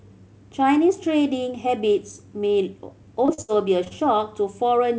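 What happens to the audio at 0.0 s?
Nothing goes wrong at 0.0 s: the speech comes through intact, band-limited by the call codec to nothing above 8 kHz but with no dropout, glitch or distortion at that moment.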